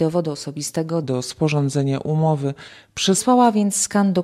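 A short sound clip with a section at the wrong speed from 1.04 to 3.18 s: it plays at 0.87x, dropping about two semitones, likely from a clock mismatch; spectrogram harmonics shift downward and stretch there.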